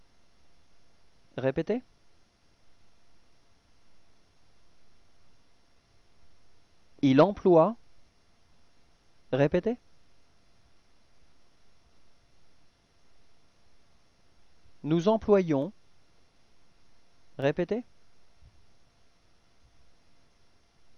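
From 0.64 s to 20.42 s, a click recurs every 0.6 s, about thirty in all, which points to clock drift buffer slips, likely from two clocks differing by roughly 300 ppm and forcing a few samples to be dropped or repeated. Unlike random dropouts, the clicks keep strict, even spacing.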